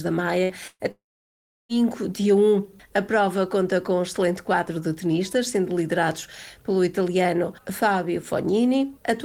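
A burst of packet loss hits at 0.43–0.52 s and again at 0.67–0.82 s, where lost audio (about 60 ms, then 120 ms) is replaced by the last sound held and fading. On a spectrogram the harmonics smear flat, and the waveform decays, with a brief gap of silence near the end of the second burst. Playback then resumes abruptly further on.

From 0.91 s to 1.72 s, the sound collapses into a short fading continuation of the last sound, then roughly 0.7 s of silence, a flat waveform and blank spectrogram. This is likely a long network dropout, with the missing stretch never recovered.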